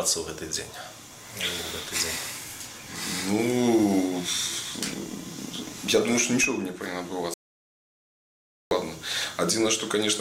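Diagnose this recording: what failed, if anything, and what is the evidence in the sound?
The input was likely lost upstream while the recorder kept writing silence, an audio dropout to silence: from 7.34 to 8.71 s, about 1.37 s goes dead, with no room tone.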